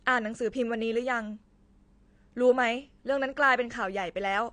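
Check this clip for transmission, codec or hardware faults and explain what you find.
One fault runs through the whole speech clip: AAC compression. Nothing sounds above 9.5 kHz, and sibilants come out dull and fizzy. The likely cause is AAC-LC coarsely quantising frequency lines at a low bitrate, around 32 kbps.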